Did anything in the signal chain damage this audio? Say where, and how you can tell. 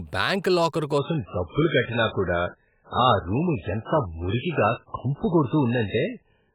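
Yes, there's an adaptive stream at a lower bitrate, a network-driven codec switch. At 0.98 s the speech abruptly loses everything above about 3.8 kHz and stays that way to the end, with no gap at the changeover. That sudden, seamless drop is the player switching renditions when throughput fell. The dull, heavily artefacted sound fits a step down from roughly 128 kbit/s MP3 to something near 8 kbit/s.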